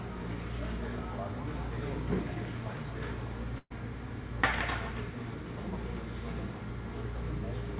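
At 3.58 s a burst of packet loss begins and runs to about 3.72 s. A short run of packets never arrived in time. The receiver filled the gap by extending the last sound for about 122 ms while fading it down. About 50 ms of that is plain silence. Then the audio resumes further on, and about 120 ms of the original sound is gone. The band stops at 4 kHz, which points to a G.711 call codec.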